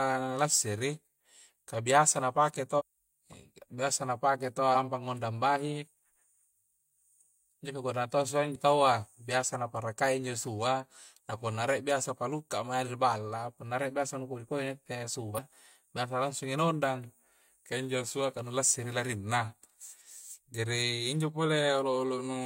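Short disruptions break into this speech clip four times: from 2.75 to 2.82 s, 4.72 to 4.76 s, 8.51 to 8.57 s and 15.34 to 15.40 s, each lasting only 40 to 65 ms. These are signs of damaged data in a compressed stream. Corrupted bytes make the decoder misread or refuse those frames and lose sync, so it outputs a brief garbled burst or gap until it locks onto the next valid frame header.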